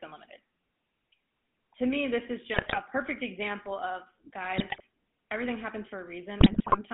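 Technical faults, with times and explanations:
Throughout: GSM full-rate codec. Buzzy, gravelly roughness confined to about 200 Hz to 3.5 kHz; the voice is rebuilt from sparse pulse excitation, which fits 13 kbps GSM full rate.
2.54–2.78 s (after "me this is"), 4.57–4.81 s (after "perfect example of"), 6.40–6.78 s: GSM bit errors. Squawks, pops and gargling as corrupted filter, pitch and gain values distort frames.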